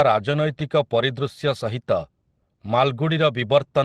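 Listening to this speech recording, nothing stood out as a technical problem.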